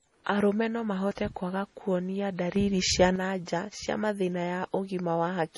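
From the start, the speech carries low-bitrate audio saved at a high bitrate. Nothing sounds above 11.3 kHz. The smeared, swirly artefacts point to a 32 kbit/s MP3, likely re-encoded at 192 kbit/s.

From 2.56 to 3.16 s there is a sudden gain jump. Speech and background noise rise together by about 6 dB, likely from a gain change applied without a ramp.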